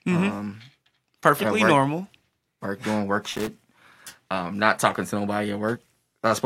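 A worn or dirty contact in the signal path, a loose connector crackle, makes and breaks rapidly between 3.33 and 3.49 s. For those 160 ms the speech is chopped into fragments, and any DC on the line adds pops, giving an irregular burst of scratchy crackle.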